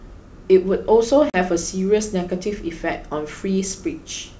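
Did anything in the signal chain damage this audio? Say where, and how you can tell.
Yes. At the network stage, there is packet loss on an ADPCM call. A hard-edged silent gap from 1.30 to 1.36 s points to a couple of lost packets. The decoder's predictor and step size then drift from the sender's, so the G.722 wideband speech resumes briefly misjudged before resettling.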